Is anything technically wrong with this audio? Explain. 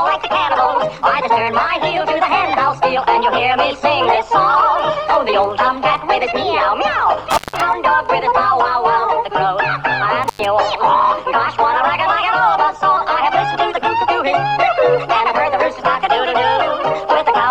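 Yes. The audio cuts out twice with crackle at the edges, first between 7.30 and 7.60 s, where the gap lasts about 161 ms, and again between 10.23 and 10.45 s, with a gap of about 98 ms. This is intermittent contact. A loose cable or plug briefly breaks the signal path, so the sound vanishes while the connection is open, and the scraping of the contacts as they part and rejoin causes the crackle on either side of each gap.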